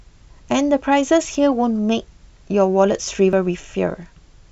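At 1.35 s and 3.33 s the speech skips abruptly, with audio missing between chunks: roughly 20 ms vanishes at each join, likely lost as a 2-second processing chunk closes. The waveform shows a sudden discontinuity there, and the spectrogram a hard vertical seam.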